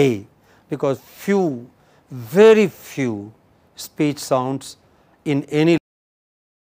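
Cut-off end at 5.78 s: the sound stops abruptly in the middle of an event rather than fading out, and nothing follows but flat digital silence for the remaining second or so. The final stretch of audio was never written out or played, so the waveform simply halts where the last delivered buffer ended. There is no natural decay or room tail, just an instant drop from active sound to silence.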